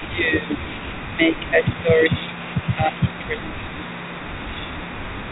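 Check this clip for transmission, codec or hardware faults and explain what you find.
Two faults are audible: an echo leak and speech suppressed in double talk.

An echo leak runs the whole clip. A faint copy of the speech returns about 0.39 s late, roughly 20 dB down. A loudspeaker echo canceller likely let it through.

Speech suppressed in double talk occurs at 0.13–0.64, 1.11–1.66, 1.82–2.38 and 2.76–3.73 s. The speech dips by about 10 to 20 dB, deepest in the last stretch. The likely cause is an echo canceller muting both talkers at once.

The telephone band stops at 4 kHz, as expected for G.711.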